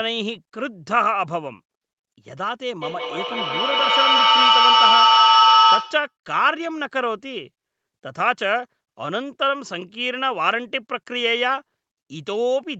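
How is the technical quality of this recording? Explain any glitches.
The recording has one serious fault: a feedback echo between two devices, from 2.82 to 6.15 s. Two devices on the same call were sharing one room, so one device's loudspeaker fed straight into the other's microphone. Each echo canceller only removes what its own device plays, so that loop went uncorrected. The speech returns roughly every 150 ms, thinner and more metallic on each pass. Instead of fading, the repeats build up until they reach about 7 dB above the speech itself, smearing it into a ringing wash. The 8 kHz top end that can be heard throughout comes from the call path's normal bandwidth.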